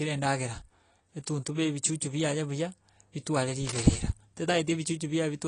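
From the start the speech sounds dull and plainly swirly, with nothing above 10.2 kHz. That's likely AAC compression at a low bitrate, something like 32 kbps. At 3.66 s, right after "ebichuchu biaye buya bitware", a rough burst of scratching runs to 4.02 s, about 10 dB under the speech. That's likely cable scratch noise from a worn connector being jostled.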